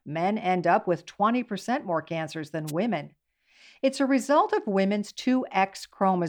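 A brief swish of static cuts across the speech from 2.67 to 2.72 s, lasting about 50 ms. It is a wireless microphone noise hit: the analogue FM radio link between the microphone and its receiver momentarily lost signal strength as reflected paths cancelled the direct one. With the carrier weakened, the receiver's own noise surged up for that short stretch before the signal recovered.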